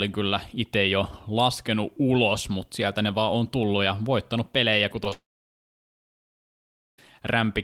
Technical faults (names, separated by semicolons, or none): short concealed packet loss; long network dropout